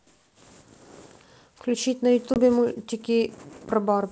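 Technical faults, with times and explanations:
2.34 to 2.39 s, packet loss on an ADPCM call: a hard-edged 20 ms hole, about one packet's worth. The decoder's adaptive predictor and step size drift from the sender's, so the speech returns slightly distorted before settling.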